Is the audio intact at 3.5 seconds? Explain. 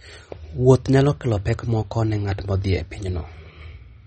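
No. At 3.5 seconds, as across the whole clip, the speech carries plainly audible damage, likely from MP3 compression at a low bitrate near 32 kbps. The encoder removed everything above 8.4 kHz and let weak frequency lines flicker between frames, producing a watery, swirly texture and smeared attacks. A spectrogram shows a flat ceiling at 8.4 kHz with patchy, blocky gaps beneath it.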